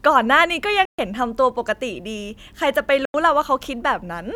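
The speech cuts to silence twice, from 0.85 to 0.99 s and from 3.05 to 3.14 s, likely a Bluetooth dropout. After each hole the sound resumes further along, as if it had kept playing, rather than pausing and picking up where it stopped.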